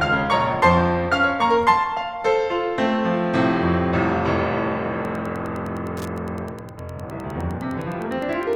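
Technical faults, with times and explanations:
4.99–8.56 s, Wi-Fi interference: a nearby Wi-Fi radio's beacon, sent every 102.4 ms, is picked up and rectified by the audio circuit, so a steady ticking at roughly ten per second sits under the music, around 30 dB below it.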